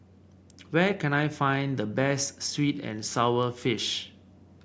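Listening to the speech from beginning to end, nothing stood out as a technical problem at any point.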